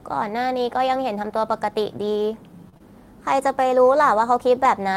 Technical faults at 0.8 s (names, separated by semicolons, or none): none